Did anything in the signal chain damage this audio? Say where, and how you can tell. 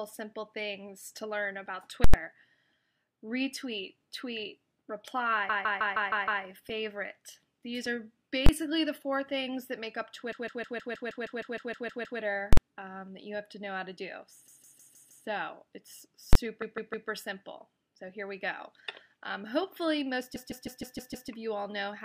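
Yes, two separate problems. First, invalid numbers at full scale, which comes from the processing and sample-format conversion end. At 2.04 to 2.14 s, 8.46 to 8.49 s, 12.53 to 12.57 s and 16.33 to 16.35 s the output sits flat at one extreme value, far beyond the audio's peaks. The longer one gives a loud pop at each edge with silence between, and the short ones are single bangs. Those lengths (about 93, 23, 46 and 23 ms) fit 4096-, 1024- and 2048-sample processing blocks, so a calculation went infinite or invalid and got clamped to the maximum value when converted.

Second, repeated frames, which points at the codec or storage side. The same roughly 157 ms chunk loops as a stutter at 5.49 to 6.43 s (6 extra plays, about 0.94 s added), 10.32 to 12.20 s (12 extra, about 1.88 s), 14.47 to 15.26 s (5 extra, about 0.78 s), 16.62 to 17.09 s (3 extra, about 0.47 s) and 20.35 to 21.29 s (6 extra, about 0.94 s). 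A run of compressed frames was written or sent more than once, and the decoder played it back again each time, which stretches the timeline.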